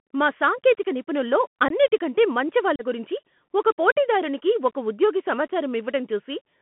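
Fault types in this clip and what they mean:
Bluetooth CVSD headset codec: the speech is confined to a 150 Hz to 3.4 kHz telephone band and coded at 64 kbps as one-bit up/down steps, leaving a granular hiss and scratchy s sounds that set it apart from clean band-limiting alone.
Unconcealed Bluetooth headset packet loss: there are two hard-edged silent holes, about 19 ms at 1.68 s after "మా సాంకేతిక నిపుణుల్లో" and about 34 ms at 2.76 s before "గురించి ఒక పోటీదారునికి ఒక". They fit a handful and then roughly ten lost voice packets, and nothing fills them, unlike concealed loss.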